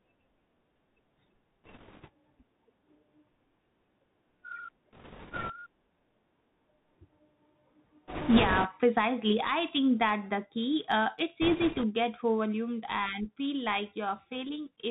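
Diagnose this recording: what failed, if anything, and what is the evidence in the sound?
Bluetooth CVSD headset codec, throughout the speech: a codec-stage fault. Nothing above 4 kHz survives, s sounds turn scratchy and granular hiss sits underneath as the adaptive one-bit step struggles.

Bit errors on a Bluetooth voice link at 1.64–2.09, 4.93–5.53, 8.08–8.67 and 11.42–11.85 s: rushing crackle without loud clicks, since each flipped bit nudges the step only slightly.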